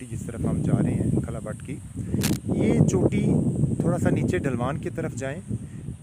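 From 2.21 to 2.37 s, a burst of cable scratch noise sits over the sound for roughly 160 ms. It is dense and irregular, a scratching, rustling texture rather than a clean click, and it comes in not far below the level of the wanted signal. The likely cause is a worn cable, connector or control carrying a DC voltage being moved, so its contact resistance fluctuated rapidly and modulated that voltage into the signal path.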